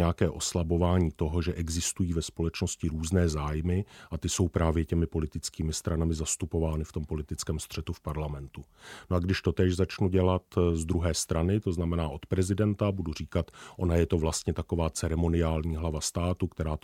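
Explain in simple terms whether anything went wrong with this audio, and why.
Nothing went wrong with this audio, and there is no fault anywhere in the speech to point to.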